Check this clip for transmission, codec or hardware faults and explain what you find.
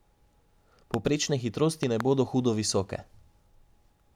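A hardware fault is present: loud pops at 0.94–0.96 s and again at 1.83–2.03 s. A sudden voltage step, likely from a plug, switch or static discharge, entered the chain. The first is a single sharp pop and the second a quick pair, each roughly 15 dB above the speech, which continues underneath.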